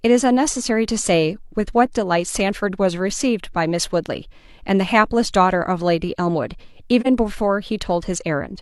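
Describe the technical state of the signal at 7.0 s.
At 7.00 s the speech drops into a brief gap from AAC frame loss with muting, lasting until about 7.07 s. The decoder zeroed the missing spectrum, and the overlapping transform windows fade the sound out and back in, so the drop is a brief, smooth dip. The lost stretch of about 43 ms fits a single lost frame. On a spectrogram it is a full-band vertical dip with tapered borders; the waveform shows a smooth taper down and back.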